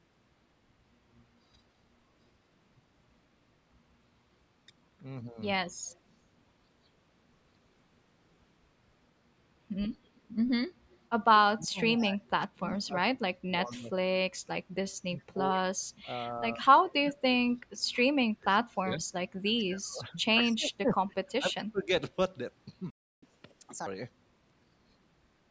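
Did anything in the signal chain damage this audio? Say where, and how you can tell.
Yes. Echo leak at 5.87, 10.15, 10.90, 15.19 and 19.58 s: faint copies trail 116 ms behind, about 30 to 40 dB down, likely an echo canceller letting loudspeaker pickup through.

Speech suppressed in double talk, 11.23–14.5 and 15.07–21.9 s: the voice dips by up to about 30 dB in pieces, likely call processing turning this talker down along with the loudspeaker echo.

Playback stall, 22.90–23.23 s: the sound stops for 319 ms mid-flow, likely the player's buffer running dry or its thread blocking.

Catch-up at higher speed, 23.23–23.87 s: playback runs at 1.5× with pitch raised about 7 semitones, as the player resamples to clear its backlog.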